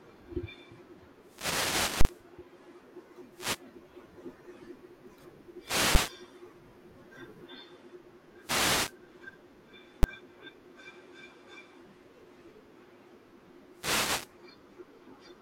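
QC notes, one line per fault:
1.17–2.30, 3.27–3.68, 5.58–6.19, 8.38–8.99 and 13.70–14.37 s: wireless microphone noise hit. The FM radio link fades as reflections cancel, so receiver hiss swells into swishes of static over the speech. On a spectrogram, broadband noise patches span all frequencies; the waveform shows a fuzzy, thickened envelope.
2.01–2.05 s, 5.95 s and 10.03 s: invalid numbers at full scale. Invalid values were clamped to maximum amplitude, pinning the output flat at one extreme value far beyond the speech peaks. The 40 ms block gives a loud pop at each edge with silence between; the 10 ms blocks give single bangs. The waveform shows flat plateaus well beyond the speech peaks, and the spectrogram shows bright vertical lines.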